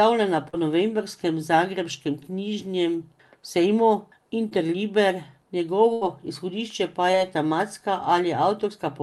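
At 0.49 s, just before "novembrskem zagrebškem knjižnem sejmu", a brief smear blurs the speech. This is short concealed packet loss: about 40 ms of the call arrived too late, and the receiver bridged the hole by extending the last sound before blending back. The same quick wobble recurs at 4.49 s, right after "novembrskem zagrebškem knjižnem sejmu", and at 7.11 s, each covering about 20 ms.

From 5.93 to 6.03 s, just before "izhodišče pa", the last sound is carried on and fades away, then jumps ahead. This burst of packet loss dropped about 80 ms in a row. The receiver kept extending the last sound while turning it down, and that stretch of speech is gone.

The whole clip has a top end limited to about 12 kHz and the usual coding noise, as expected from an Opus call path.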